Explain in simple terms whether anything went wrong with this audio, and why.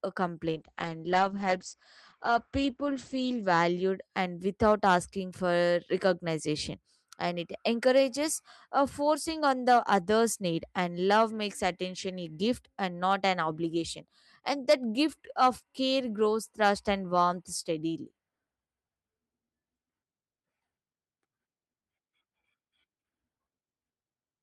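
From about 0.52 to 4.09 seconds, the speech turns rough and watery, and the crisp top end goes dull and muffled, as if heard through a cheap phone line. Clarity returns just before "and without asking for". This is a call bitrate drop: the connection seemed to have less room, so the encoder squeezed the sound into far fewer bits for nearly three seconds. It coded the sound more coarsely and threw away everything above about 8 kHz.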